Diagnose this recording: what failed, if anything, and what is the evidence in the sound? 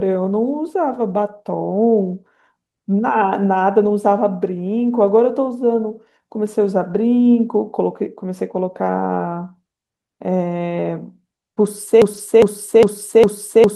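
Network packet loss, covered by codec error correction: brief rough, noisy patches at 3.85–3.87, 5.07, 6.89–6.95 and 12.13–12.19 s. On a spectrogram these are short smeared slices.

A broken-record loop starts at 12.02 s: a 0.41 s fragment repeats back to back until the end, likely from a stalled playback or stream buffer. The waveform shows identical repeating blocks.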